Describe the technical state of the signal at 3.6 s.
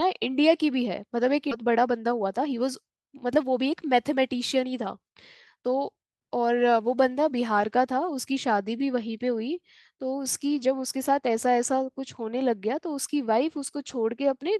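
At 3.6 s the speech runs hurried, about 8 percent fast, yet keeps its normal pitch. This is a jitter buffer speed-up lasting from 1.61 to 5.09 s: with too much audio queued, the receiver repeatedly cut out pitch-period-sized slivers, trimming roughly a third of a second overall.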